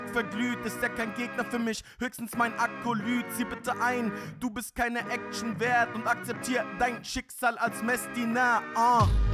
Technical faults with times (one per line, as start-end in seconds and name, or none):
none